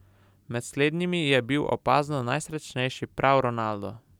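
Nothing in this bit of speech jumps out as a technical fault; it just runs along with no dropouts, glitches or odd noises to point to.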